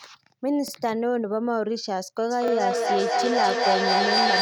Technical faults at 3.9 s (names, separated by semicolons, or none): feedback echo between two devices